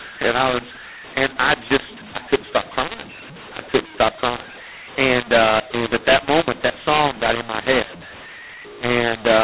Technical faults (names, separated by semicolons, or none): mu-law and A-law mixed up